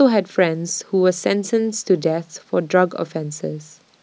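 Nothing in this short speech recording stands out as a technical fault, with no dropouts, glitches or distortion cropping up anywhere along the way.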